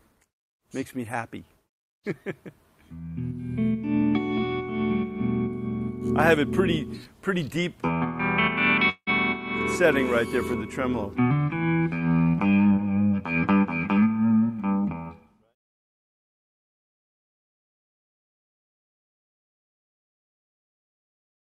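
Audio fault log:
8.89–9.10 s, long network dropout: The sound suddenly turns into a smeared, fading buzz that carries on for about 0.17 s. It then drops to near-silence for roughly 0.07 s. Playback resumes at 9.10 s, and about 0.18 s of the original audio never returns. This is likely a stall in the incoming stream. The receiver stretched the last sound it had to cover the gap, let it die away, then jumped ahead.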